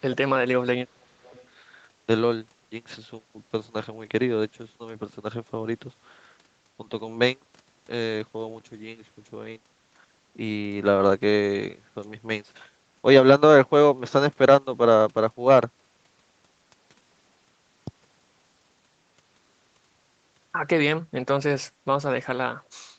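Right from the start, 0 to 0.25 s and again 0.59 to 1.35 s, the speech sinks and breaks up, dropping by roughly 35 dB and then 25 dB. That's speech suppressed in double talk: the echo canceller likely couldn't separate this talker from the far side talking over them, so it turned everything down.

Straight after, 1.36 to 1.43 s, there's a brief, very faint echo leak, a scrap of delayed copy arriving about 384 ms late, way below the speech. Likely the loudspeaker side's echo canceller didn't fully scrub its loudspeaker pickup and sent that bit back.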